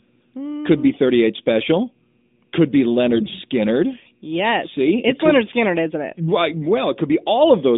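From 3.15 to 3.39 s, AMR bit errors make the speech hoarse and gargly. Corrupted bits misplace the excitation pulses, and the spectrogram shows smeared, noisy harmonics across roughly a dozen 20 ms frames.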